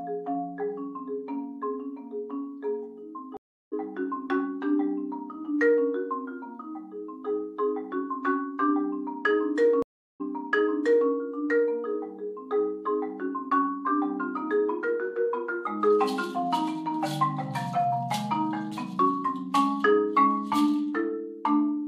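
The audio has two stream reconnect faults, where the connection dropped and the player restarted its decoder mid-stream. At 3.37 s the sound cuts out for 348 ms and resumes about 0.4 s further on, so material is skipped. At 9.82 s a 373 ms silence is followed by a restart 906 ms earlier, so part of the audio repeats, likely because the server resent a burst of data on reconnection. The disturbance ends by 11.10 s.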